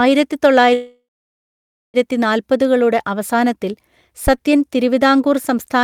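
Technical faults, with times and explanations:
0.73–1.97 s, call audio freeze: the speech stops for 1.2 s, with a short fading tail before 0.91 s of silence. It likely comes from delayed packets emptying the jitter buffer. The speech then resumes with nothing lost, arriving 1.2 s later.
4.27–4.34 s, phantom power thump: a deep low-frequency thump with a decay of about 15 ms, caused by a supply switching on a live input and the voltage step passing through the coupling capacitors.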